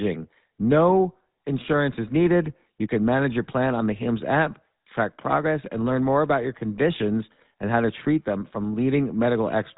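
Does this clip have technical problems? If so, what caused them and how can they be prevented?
Yes. Throughout the speech there is plainly audible GSM full-rate codec damage, a buzzy, gravelly roughness and nothing above 3.8 kHz, which fits the 13 kbps GSM full-rate codec. It models the vocal tract and excites it with sparse, regularly spaced pulses, discarding excitation detail and all upper bandwidth. To prevent it, record or transmit over a wideband codec at a higher bitrate instead of a GSM full-rate channel.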